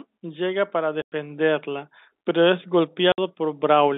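At 1.02 s, right after "llega para", a 100 ms hole cuts the speech. It is packet loss filled with silence, which fits five 20 ms packets. A 60 ms gap follows at 3.12 s after "pero es". Both gaps sit in the narrow telephone band.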